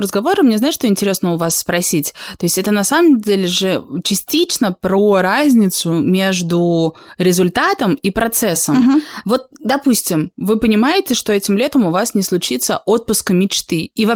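Around 1.41 to 1.51 s there's a lost packet rebuilt from error correction. Three separate packets went missing, and the decoder filled about 60 ms with low-bitrate backup copies carried in the next packets. There's no gap, just a brief rough, noisier patch.

From 4.98 to 5.93 s the speech slows by about 5.9% and drops about a semitone (roughly 105 cents) before snapping back. From 8.94 to 10.02 s it does the reverse, speeding up 5.9% and rising about 99 cents. Both are likely drift correction steps, where clock-matching software jumps the playback rate to rebalance its buffer.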